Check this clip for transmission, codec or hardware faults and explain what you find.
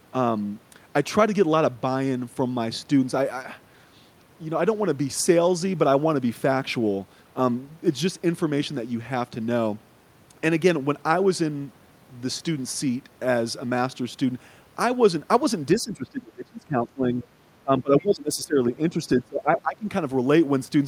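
Speech suppressed in double talk appears three times: 15.8 to 17.24 s, 17.62 to 19.0 s and 19.17 to 19.87 s. The speech dips by around 20 to 25 dB, likely because an echo canceller could not separate the local talker from far-end sound playing on the loudspeaker and turned both down. The waveform shows sudden envelope collapses.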